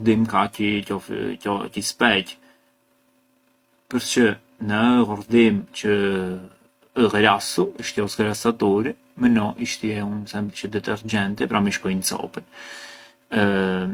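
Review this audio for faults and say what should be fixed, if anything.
The speech appears to have been lossy-encoded twice, likely transcoding between lossy codecs: an HE-AAC stage at a low rate, consistent with about 32 kbit/s, then Opus. Throughout, HE-AAC's synthetic upper band and Opus's own smearing stack, leaving an artificial top end and blurred consonants. Prevent this by encoding once from the original source instead of re-encoding an already compressed file.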